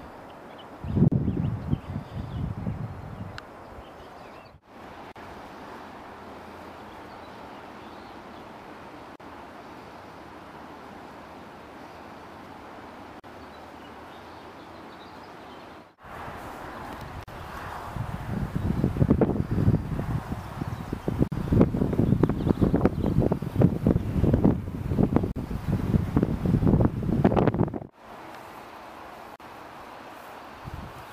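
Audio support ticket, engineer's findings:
Gap at a join of encoded pieces: short dropouts, about 36 ms at 1.08 s, then 40 ms at 5.12, 9.16, 13.20, 17.24, 21.28, 25.32, 29.36 s, every 4.0 s. Segments encoded separately and concatenated untrimmed; encoder delay and last-frame padding left in.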